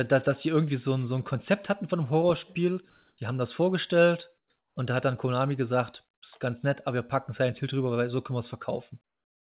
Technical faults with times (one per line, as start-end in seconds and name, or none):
2.90-3.18 comfort noise in place of the background
4.38-4.76 comfort noise in place of the background
9.04-9.51 comfort noise in place of the background